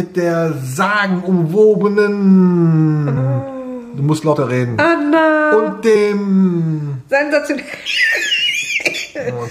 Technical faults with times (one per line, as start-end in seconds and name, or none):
3.16 compressed frames skipped
4.32 compressed frames skipped
5.95 compressed frames skipped
7.85 compressed frames skipped